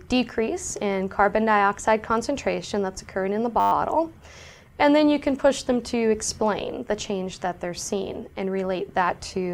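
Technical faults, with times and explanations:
3.60 to 3.72 s, system hang loop: the system stalled while the audio hardware kept replaying one 10 ms slice of its ring buffer, twelve times over. Repeating that short a segment produces a steady 100 Hz buzz, and essentially no audio is lost.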